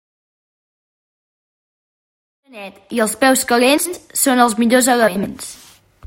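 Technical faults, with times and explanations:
3.77–3.98 s and 5.07–5.26 s, frames out of order: in each stretch two adjacent blocks of about 80 ms were decoded in swapped order, so a short piece of the speech plays with its halves exchanged. The result is a brief garbled flutter. Nothing is lost, only rearranged. The first event comes just after the smooth fade-in that rises from about 2.5 s to 3.25 s.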